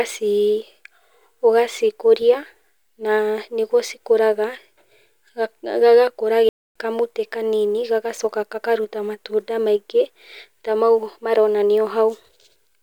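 Speech, with a playback stall from 6.49 to 6.76 s: the sound halts mid-flow for about 266 ms of dead silence, likely because the player ran short of data or its thread was blocked. Unlike a natural pause, the cut is abrupt rather than falling at a phrase boundary.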